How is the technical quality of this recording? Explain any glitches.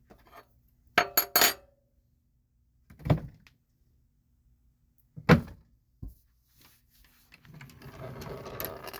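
No technical faults can be heard in these sounds.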